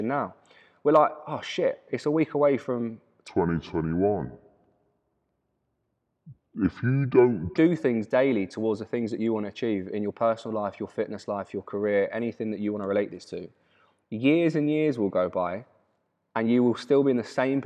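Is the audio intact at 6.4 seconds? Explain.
No. From 3.28 to 7.57 s, a wrong sample rate, consistent with 48 kHz audio played at 32 kHz, slows the speech to two-thirds speed and seven semitones lower.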